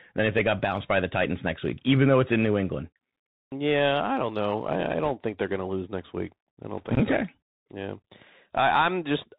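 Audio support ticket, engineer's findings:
Muffled, narrowband speech with granular hiss and scratchy s sounds throughout; nothing above 4 kHz. Bluetooth CVSD headset codec, one-bit slope tracking, which fits a 64 kbps link.

Brief rushing crackle at 5.05–5.11 s, between "don't know I I" and "think they're going to", and 6.77–6.94 s, after "lose next week I". Bit errors on a Bluetooth voice link, roughly one to two percent.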